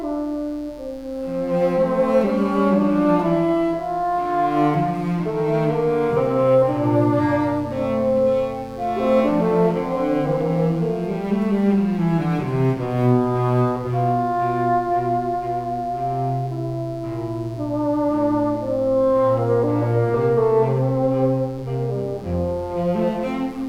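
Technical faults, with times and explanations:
Throughout, mains buzz: a steady, raspy buzz sits under the sound at around 30 dB down, built on 60 Hz. Sharp switching spikes leak in twice per mains cycle, stacking harmonics up into the kilohertz range, which gives it that gritty edge.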